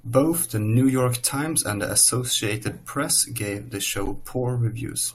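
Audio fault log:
4.06–4.09 s, corrupt frame decoded: right after "gave the", a short burst peaking near -15 dBFS spans a couple of frames. Damaged bits were decoded as wrong gains and codes, misplacing energy across frequency; unlike a dropout's gap or a click's single broadband tick, it sounds garbled.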